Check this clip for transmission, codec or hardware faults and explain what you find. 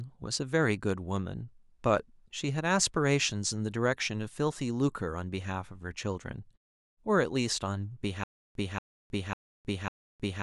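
One fault: a stutter with silent gaps from 8.24 s to the end. A 233 ms burst of speech repeats four times, each followed by 316 ms of digital silence, on a steady 548 ms cycle. A stalled player or stream likely replayed its last fragment at each retry, so the speech meant for that stretch is lost.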